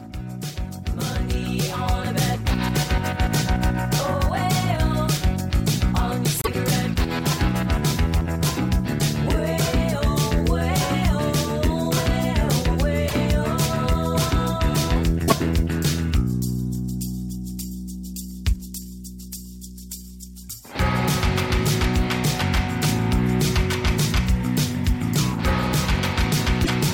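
Short garbled bursts sit at 6.42 to 6.48 s, 13.08 to 13.13 s, 15.27 to 15.33 s and 26.63 to 26.69 s. Each lasts about 56 to 69 ms, roughly two MP3 frames of 26.1 ms. The sound jumps ahead, then chirps or hisses briefly. The likely cause is a broken MP3 bit reservoir. Frames were lost, so the next frames read borrowed bits from the wrong data and decode as noise.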